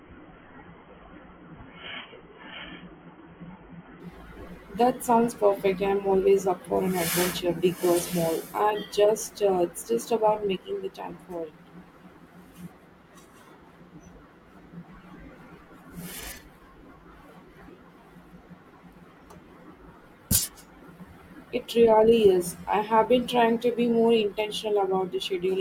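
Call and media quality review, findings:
Adaptive stream starting at a low bitrate, 0.0–4.0 s: speech band-limited, nothing above 3.3 kHz, heavier codec artefacts, then an abrupt step up with no gap. Player opened on a low AAC rendition (sounds near 16 kbit/s), switching once throughput was measured. Spectrogram: hard ceiling at 3.3 kHz ending sharply at 4.0 s.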